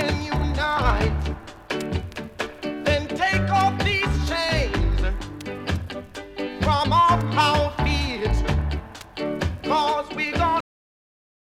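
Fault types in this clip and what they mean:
Cut-off end: The last buffers never played. The sound stops mid-event at 10.61 s and drops straight to digital silence, with no decay.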